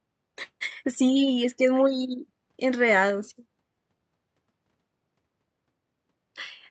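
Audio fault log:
No fault can be heard anywhere in this speech recording. Nothing in it calls for an entry in the log.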